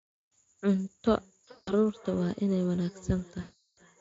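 From 1.05 s to the end, a feedback echo between two devices appears: a second device in the room replays the far end, and its microphone sends it back. Speech returns roughly every 0.4 s, about 21 dB below the direct signal. On a spectrogram, faint, thinned copies of each syllable trail at that regular spacing.

At 1.51 to 1.74 s and again at 3.41 to 3.81 s, VoIP packet loss concealed by the speech codec takes over, with 160 ms and then 360 ms of missing audio. The Speex decoder, otherwise carrying only light coloration, extends the last pitch and filter into a fading, buzzy tone or coloured noise. On a spectrogram this looks like flat, smeared bands whose energy steadily drops.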